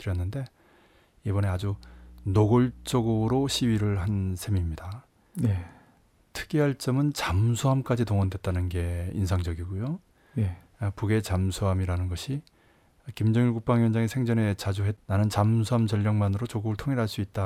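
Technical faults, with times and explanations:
1.58–4.19 s, mains hum: a steady low 60 Hz tone sits under the speech, roughly 20 dB below it, then stops. A ground loop or nearby transformer is leaking the power-line frequency into the signal path for this stretch, giving that constant drone.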